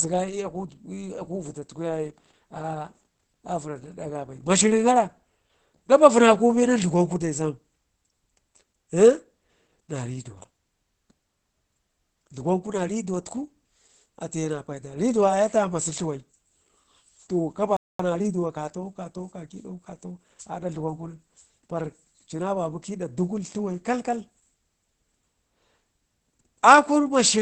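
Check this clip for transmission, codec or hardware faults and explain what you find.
Three faults are present: codec damage throughout, a brief dropout, and a hurried stretch after it.

Opus compression runs throughout. The speech sounds muffled and hoarse, with nothing above about 8 kHz. This likely comes from the speech mode at a low bitrate, near 12 kbps.

A playback stall occurs from 17.77 to 17.99 s. The sound cuts out for about 230 ms, likely because the player ran short of data.

Time-compressed catch-up follows from 17.99 to 20.25 s. The player trims small pieces to clear its backlog. The speech runs 1.1 times fast at normal pitch.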